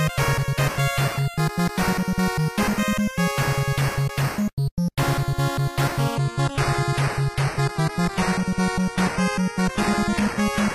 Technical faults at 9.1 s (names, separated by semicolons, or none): adaptive stream at a lower bitrate